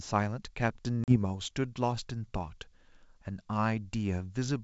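At 1.04 s the call suffered packet loss on an ADPCM link: about 40 ms of audio, roughly a couple of packets, went missing and was filled with silence, leaving the receiving decoder's predictor and step size out of step with the sender's. A hard-edged hole opens in the speech, which then returns with slight distortion that settles by 1.17 s, against the clear, wideband G.722 sound around it.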